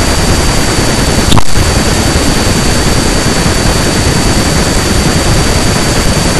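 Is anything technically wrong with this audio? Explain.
Yes. Hard clipping runs through the whole speech clip. The signal is driven about 31 dB past what a stage can pass, flattening peaks on roughly one sample in twenty. Those sharp corners spray high harmonics, giving a harsh fuzz on loud sounds, unlike soft saturation's rounder warmth.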